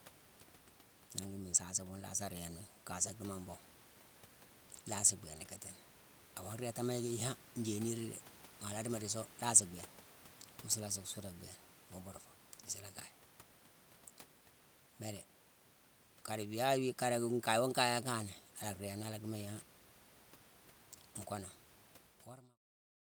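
No technical faults can be heard anywhere in this speech recording. Room noise sits about 22 dB below the speech throughout, and near the end the level eases out in a smooth fade from roughly 22 s, reaching silence at 22.61 s.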